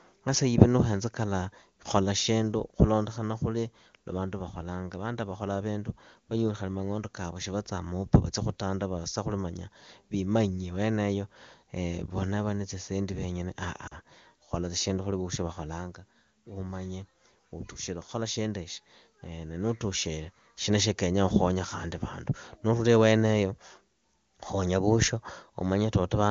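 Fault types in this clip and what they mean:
Lost AMR speech frames: at 13.87 to 13.97 s about 40 ms of speech went missing, which fits two 20 ms frames. The decoder bridged the gap by repeating the last good pitch and vocal tract settings at falling gain, heard as a brief drop toward near silence.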